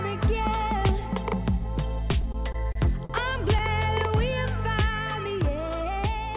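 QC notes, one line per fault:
2.12–3.61 s, repeated stalls (stutter): the audio catches eight times in this stretch. Packets arrived too late, so the jitter buffer kept running dry and the receiver stretched the last sound to fill each wait, about 153 ms in total, with the longest hold 42 ms and roughly a tenth of the span concealed. Nothing drops out, but the flow drags and hiccups. On a spectrogram, short frozen or smeared columns repeat in a row. In the waveform, brief looped cycles appear, and the longer holds taper off in level.
4.08–4.35 s, jitter buffer slow-down: this short passage plays at about 90% speed with the pitch unchanged, so the sounds come out drawn-out. The buffer was building a reserve by repeating single pitch periods, which added 35 ms here. On a spectrogram, harmonics run unbroken but stretched. The waveform shows near-identical periods copied in succession. Across the clip, nothing sits above 4 kHz, which fits a narrowband G.711 A-law call at 64 kbps.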